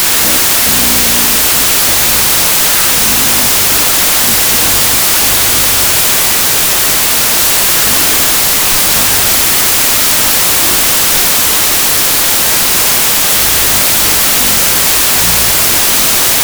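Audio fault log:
throughout, wrong sample width: loud noise with the speech buried inside, running at half speed and an octave low. Each 32-bit sample is read as two 16-bit values, doubling the count; only the upper halves keep the signal, while the lower halves add noise.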